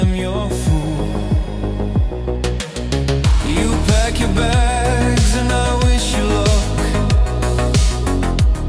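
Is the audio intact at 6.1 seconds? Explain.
Yes, at 6.1 seconds the audio plays through cleanly with no dropout, click, distortion or other fault.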